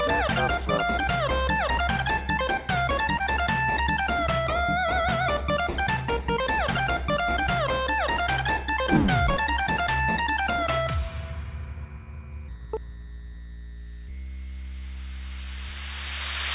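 Short concealed packet loss at 3.18 to 3.21 s: about 20 ms of the audio failed to reach the decoder in time, and the receiver covered roughly 14 ms of that gap by extending the preceding sound before blending back into the real signal. The result is a brief smear in the audio at that point. The call path's band limit, with nothing above 4 kHz, fits G.711 mu-law coding at 64 kbps.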